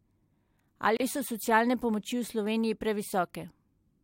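A short speech clip with a gap at a join of encoded pieces: from 0.97 to 1.00 s the sound drops out for about 32 ms, then resumes exactly where it left off. Separately encoded segments, apparently about 4 s long, were joined without trimming the encoder's start-up delay and final-frame padding, so that silence remains. A waveform shows a flat stretch with smeared edges, and a spectrogram shows a thin vertical blank band, smeared at its borders.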